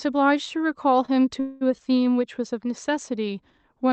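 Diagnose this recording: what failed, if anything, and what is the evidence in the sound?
A short stall from a late packet sits between 1.05 and 1.10 s, at the network and jitter-buffer stage. A packet missed its playout time, so the receiver held the last sound for about 26 ms, then resumed at the same point. Nothing is lost; the speech is delayed by that amount.

A call audio freeze runs from 1.40 to 1.77 s. The sound is continued as a fading fill for about 209 ms without dropping to silence, then picks up where it stopped, adding 209 ms of delay. The likely cause is packets held up on the network, emptying the jitter buffer.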